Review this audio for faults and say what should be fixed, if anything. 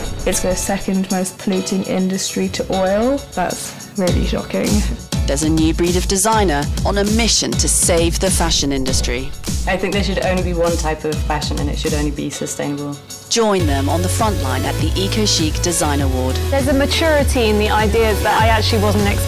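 No faults are audible; nothing needs fixing.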